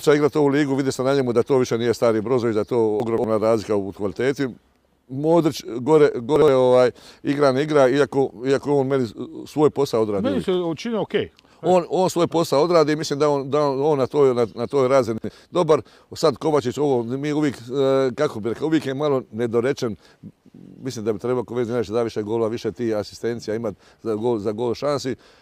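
At 3.0 to 3.24 s, 6.36 to 6.48 s and 15.18 to 15.3 s, chunks play out of order. Blocks of about 60 ms are swapped. In the first event, one block lands three places late, and in the other two it trades places with its neighbour. Each is heard as a jumbled moment with hard joins. Unlike a dropout or a stutter, nothing goes missing or repeats. The material is all there, only rearranged.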